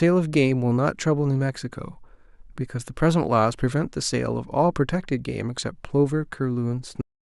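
At 7.01 s the speech stops abruptly: a cut-off end. The final stretch of audio was never written out or played back, so the signal ends partway through a sound rather than finishing it. There is no natural decay or room tail. The level falls straight to digital silence, which then holds for the remaining third of a second. The truncation is heard as a hard, unnatural stop.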